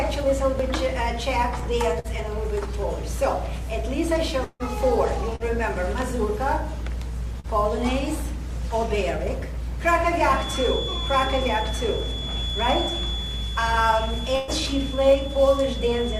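At 1.99 to 2.07 s, a burst of packet loss hits. About 48 ms of held, fading sound covers the hole, and some 40 ms of audio is skipped.

From 4.44 to 4.63 s, a buzz or hiss trails on for about 153 ms, then about 30 ms of silence. This is likely a long network dropout, losing about 160 ms.

Short concealed packet loss follows at 5.36 to 5.43 s and 7.40 to 7.47 s. Each is a brief smear of about 40 ms, with 40 ms gone.

From 10.3 s to the end, a thin whistle at one pitch near 3.4 kHz sits well below the sound and swells and fades slowly. Likely cause: a feedback whistle.

At 14.36 to 14.51 s, a longer burst of packet loss holds and fades for 120 ms, skipping 120 ms.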